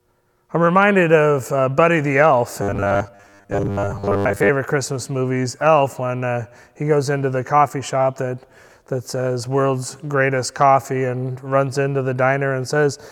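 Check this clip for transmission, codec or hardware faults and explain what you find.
One fault stands out. From 2.62 to 4.49 s there's robotic sound from repeated short buffers: a rigid 100 Hz buzz, likely from a 10 ms chunk looping while most of the real audio is skipped.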